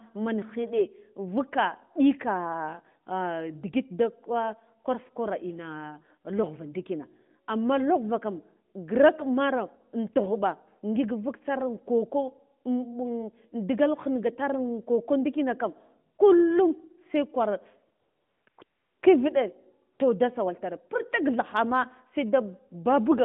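A speech clip carried over a narrowband phone line (roughly 150 Hz to 3.5 kHz, lightly coloured by AMR-NB) where the background briefly turns into a smooth, even hiss that switches in and out. This happens at 16.16 s just after "koko ndikina kam", at 18.00–18.46 s, at 18.50–18.58 s and 18.64–19.02 s just before "kiviɗe toh", and at 19.94–20.00 s. This is AMR comfort noise. The sender treated those moments as silence and stopped sending speech frames, so the receiver filled the gaps with generated noise shaped only to a rough level and spectrum.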